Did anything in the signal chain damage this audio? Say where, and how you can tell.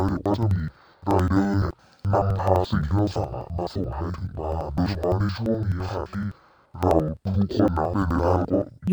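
Yes, at the sample-format conversion stage: it's interleaved audio read as planar, all the way through. The speech sits a full octave low and sounds doubled and choppy, with a stutter repeating about every 85.33 ms (roughly 11.7 Hz), which fits a 4096-sample block. Each block's alternating left-right samples got split into a first half and a second half. Both halves play at half speed side by side, so the pitch drops an octave but the pace stays right.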